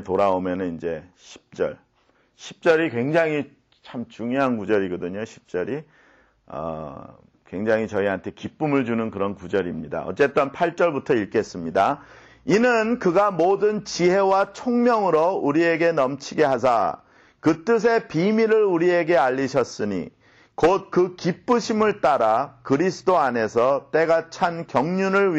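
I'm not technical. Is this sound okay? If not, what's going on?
Yes, this one's fine: nothing in it jumps out as broken or glitchy, so there's nothing here you need to worry about.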